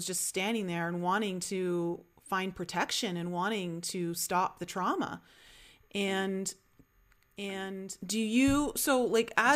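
A speech recording in which, from 7.37 s to the end, a second copy of the same audio suddenly enters, trailing by about one and a half seconds and roughly 5 dB quieter, with no reverberant tail: a doubled audio track, likely from a slower capture path or a misaligned edit.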